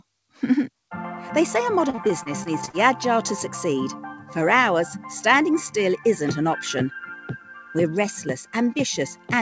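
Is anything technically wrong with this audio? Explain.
Yes, there are two faults. From 1.90 to 2.75 s, repeated packet loss (robotic sound) occurs: seven short gaps, the longest 40 ms, were patched by extending the preceding sound, so about a fifth of that span is concealment. It sounds choppy, with pieces missing. A spectrogram shows smeared, repeated slices and abrupt vertical seams.

From 4.17 to 4.33 s, the noise suppressor cuts the sound, mistaking it for noise and pulling it down by up to about 9 dB for roughly 150 ms. The sound briefly sinks in level. The waveform shows a visible dip in the envelope, and the spectrogram fades there. Throughout the clip, nothing appears above 8 kHz, which fits a wideband call codec such as G.722.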